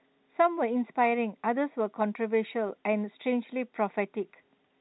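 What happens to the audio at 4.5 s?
Nothing goes wrong at 4.5 s: the speech carries on intact through that moment, with only the ordinary narrowband quality of G.711 telephone coding and no dropout, click or distortion.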